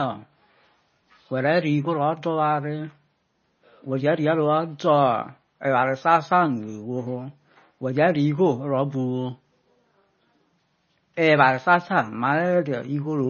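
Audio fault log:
throughout, MP3 compression: the speech has no content above 6.6 kHz and carries a heavy watery, swirling texture, with s sounds turning metallic and chirpy and consonant onsets smeared. The cause is likely an MP3 encoder starved of bits, which fits a bitrate of around 24 kbps. It cuts the treble at a fixed frequency and zeroes weak frequency lines, which flicker on and off from frame to frame and create the swirl.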